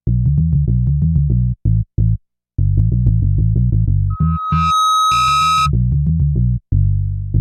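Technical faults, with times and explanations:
4.10 to 5.70 s, loudspeaker feedback squeal: a single 1.3 kHz tone swells up over under a second until it is about as loud as the sound itself. A microphone is picking up its own loudspeaker. At that frequency the loop gain tops one, so the tone feeds itself.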